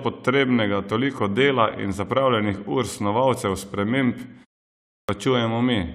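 At 4.76 s, after a pause of about 0.39 s, the speech resumes abruptly out of silence with its opening sounds missing. About 0.33 s of audio, running to 5.09 s, is swallowed, so the next word begins partway through. This is a clipped start after a pause: the output device appears to have gone idle during the gap and needed time to wake and lock again, discarding the sound that arrived before it was ready.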